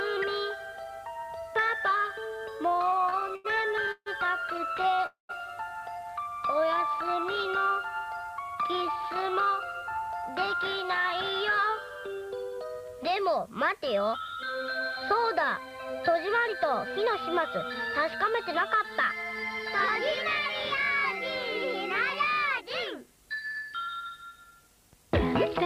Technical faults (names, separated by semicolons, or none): repeated stalls (stutter); short stall from a late packet; call audio freeze; jitter buffer speed-up